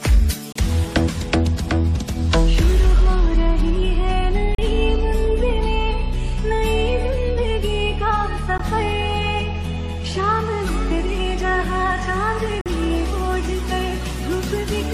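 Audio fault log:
0.52–0.56 s, 4.55–4.58 s, 8.58 s, 12.61–12.66 s: gap between stream segments, hard-edged silences of 16 to 47 ms every 4 s where segment timestamps fail to meet; flat silent runs on the waveform, blank vertical stripes on the spectrogram.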